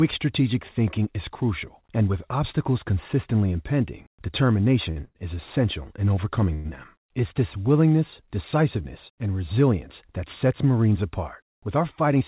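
At 4.91 to 4.99 s and again at 5.05 to 5.18 s, just before "is essential in", a packet arrived late and the jitter buffer ran dry. The receiver held the last sound for 50 ms and then 98 ms, giving two short stalls from a late packet: a slightly buzzy smear and no lost audio.

From 6.54 to 6.67 s, right after "is essential in", the sound freezes for 105 ms. It continues as a fading buzz rather than dropping to silence, then resumes where it stopped. This is a call audio freeze, likely from packets held up in transit emptying the jitter buffer.

Between 11.44 and 12.21 s, a jitter buffer speed-up trims the backlog. The receiver cuts many pitch-period-length slices, totalling about a twentieth of a second, so the audio runs at 106% speed at unchanged pitch and sounds slightly hurried. Throughout, the call path's band limit leaves nothing above 4 kHz, which fits a G.711 mu-law codec at 64 kbps.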